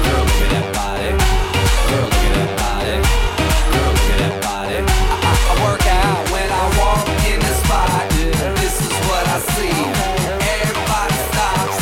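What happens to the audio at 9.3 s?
Nothing goes wrong at 9.3 s; the audio plays through that moment intact, with no dropout, click or distortion.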